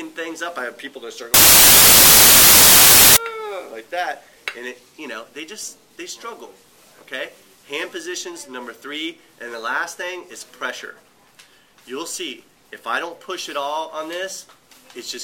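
From 1.34 to 3.17 s the sound is swamped by loud, harsh noise, close to white on the louder passages. This is samples built from the wrong bytes: the reader assembles each sample from its bytes in the wrong way, whether offset by a byte, in swapped order or with another alignment assumed. The rapidly fluctuating low bits end up as the dominant part of each value, which produces the hiss.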